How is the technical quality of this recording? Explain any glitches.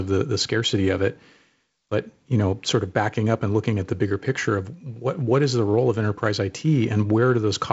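The technical quality of this recording holds up, with no glitches to explain.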